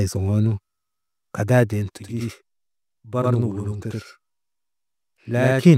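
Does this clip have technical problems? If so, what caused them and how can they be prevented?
Yes. From 1.97 s to 5.63 s the speech is heard twice, with a channel delay (doubling) fault. One channel arrives about 85 ms late, which fits a 4096-sample buffer. When the two channels are folded to mono, the late copy stays distinct. It sounds like a slap echo at equal level. To prevent it, align channel buffers before summing and check mono compatibility after any processing stage.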